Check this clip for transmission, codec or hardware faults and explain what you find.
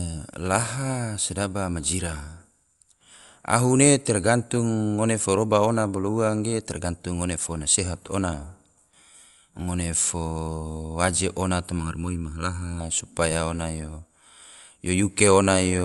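Two faults are audible: codec damage throughout, and a brief stretch of comb filtering.

Dolby Digital compression, likely: throughout the speech, a low-bitrate encoder, consistent with about 64 kbps, has cut the band so nothing remains above 11.4 kHz and has replaced starved frequency lines with dither noise. The result is plainly dull, with rough, fluttering noise around voiced tones.

Channel delay (comb filtering): from 11.8 to 12.8 s, between "waje ona" and "supaya ona yo", one channel runs late by under a millisecond and the two are summed to mono. Shared content cancels at evenly spaced frequencies starting around 700 Hz, making the speech hollow and phasey.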